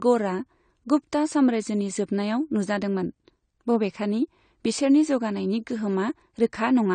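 From start to finish the speech sits behind a dull, band-limited wall with nothing above 9 kHz, and sibilants come out smeared and warbly, likely AAC compression squeezed to around 32 kbps.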